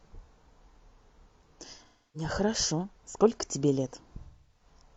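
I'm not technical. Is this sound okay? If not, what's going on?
No. Twice, pieces of the compressed speech stream went missing. This is AAC frame loss with concealment: the player patched each gap by reusing the last good sound. From 1.85 to 2.29 s, and in scattered bursts from 4.23 to 4.81 s, the speech turns smeared and noisy.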